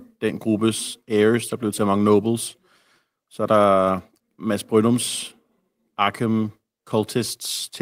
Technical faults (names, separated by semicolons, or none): none